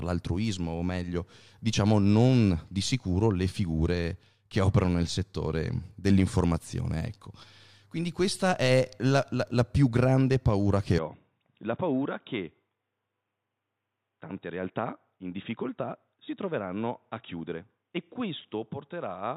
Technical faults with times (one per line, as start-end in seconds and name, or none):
10.98-19.36 input switched to a poorer device